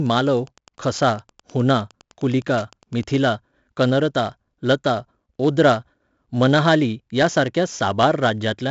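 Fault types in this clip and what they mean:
4-bit ADPCM compression: heavy gritty hiss riding every loud syllable, nothing above 7.7 kHz; a spectrogram shows level-tracking broadband noise and a hard top cutoff.
Wi-Fi interference: faint ticking every 102.4 ms, about 30 dB down, from 0 to 3.29 s; the waveform shows evenly spaced spikes, vertical lines on a spectrogram.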